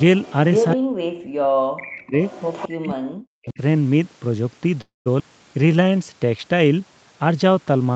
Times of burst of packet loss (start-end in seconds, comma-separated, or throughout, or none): none